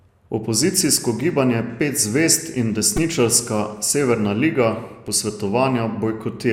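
At 0.97, 2.97 and 5.08 seconds, the speech catches on a repeated buffer. New audio arrived late, so the same tiny slice replayed every 2.67 ms, which fits a 128-sample buffer. Each event is a click or brief buzz, and a few milliseconds of speech go missing.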